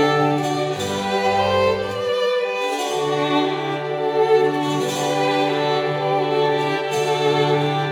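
No technical faults are audible anywhere in the music.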